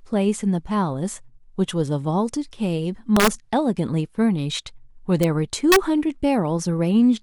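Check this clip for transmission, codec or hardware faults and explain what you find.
Integer overflow breaks up this speech at 3.17 to 3.28 s, at 5.23 s, and at 5.72 to 5.76 s. Loud peaks pushed about 0 to 2 dB past the integer limit. Instead of clamping, those samples wrapped to the opposite sign, producing sharp, violent cracks.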